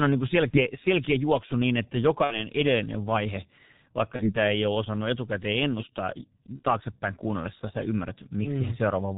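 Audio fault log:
Throughout: G.723.1 codec, heavily damaged at 6.3 kbit/s. Nothing above 4 kHz survives, and the voice model changes only every 30 ms, so speech sounds muffled and hoarse with smeared consonants. The hoarseness, beyond the missing treble, sets it apart from a simple low-pass filter.
0.50–0.59 s, 2.24–2.46 s, 4.16–4.36 s, 6.56–6.63 s: VoIP packet loss concealed by the speech codec. The decoder extends its last pitch and filter with falling gain, so each gap fills with a fading buzz or coloured noise instead of the silence of a plain dropout. The speech stays weak or distorted afterwards, as at "edellinen vaihe vaikka".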